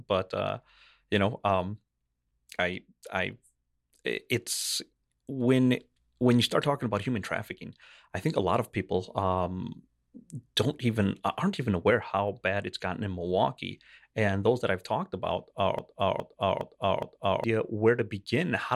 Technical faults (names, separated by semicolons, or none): broken-record loop